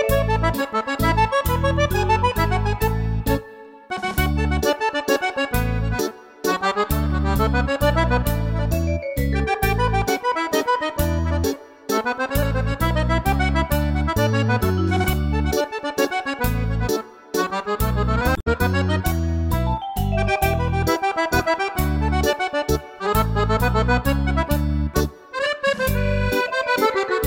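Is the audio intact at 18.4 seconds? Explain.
No. From 18.33 to 18.47 s there is damaged data in a compressed stream. Corrupted bytes make the decoder misread those frames, lose sync and hunt for the next valid frame header, producing a short chirp or squawk lasting about 150 ms.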